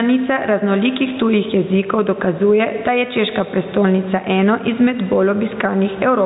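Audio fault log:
throughout gain pumping: the room noise sits about 33 dB below the speech, the gain swings by around 10 dB, and loud and soft syllables are squashed close together in level. Input gain set far too high with a fast limiter pulling it down on each loud sound is the likely cause. Unlike a noise gate, the background never drops to silence.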